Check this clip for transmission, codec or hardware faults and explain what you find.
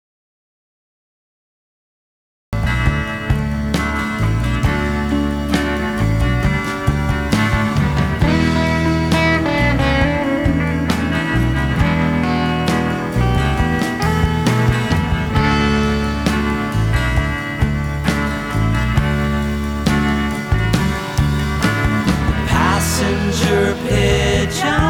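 One fault is present: an audio dropout to silence from the very start to 2.53 s. The clip opens in silence, with no room tone, before the sound arrives abruptly mid-flow. The input was likely lost, through a disconnected device, failed link or mute, while the recorder kept writing silence, so whatever preceded it is gone.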